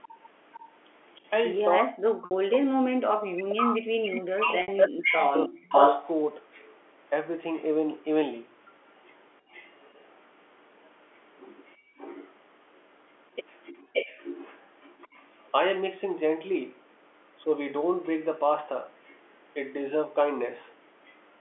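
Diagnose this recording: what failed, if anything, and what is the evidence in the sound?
An echo leak runs through almost the whole recording, from 0.02 s to 21.16 s: a second copy of the speech arrives 572 ms behind the first, only a few dB quieter. This points to call processing, most likely a far-end loudspeaker whose echo canceller failed to converge, so its microphone returned the sound. On a spectrogram, the echoed voice's harmonic patterns reappear shifted about 0.57 s to the right. The waveform shows overlapping envelopes rather than clean gaps between phrases.

Speech suppressed in double talk occurs between 1.78 s and 5.81 s, while the returning echo overlaps the live talker. For roughly three seconds in total, the speech dips in chunks, at worst by around 40 dB. This is a call-processing fault, likely the echo suppressor mistaking the near talker for echo and attenuating everything. 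On the waveform, the envelope collapses in blocks. On the spectrogram, the harmonics fade or vanish abruptly, starting from the upper bands.

Packet loss with pitch repetition hits twice, at 2.25 to 2.31 s and at 4.62 to 4.68 s, each a 60 ms gap, which fits two consecutive lost packets. This is a network fault, concealed at the receiver by repeating the last pitch cycle and fading it. Each gap sounds like a brief held note that fades into silence before the speech returns with a short cross-fade. The spectrogram shows frozen, perfectly flat harmonic stripes. The waveform shows identical repeating cycles decaying before normal speech resumes.

Background gated by the echo canceller appears at 3.82 to 3.92 s, a 100 ms drop of about 39 dB, and again across 9.41 to 13.93 s, with brief dips adding up to roughly 400 ms and reaching about 23 dB. This is call processing: the canceller closes the microphone hard while the loudspeaker plays. 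The room noise floor pumps in and out. A spectrogram shows dark vertical notches through the noise floor, and the waveform's baseline noise pinches to near-silence.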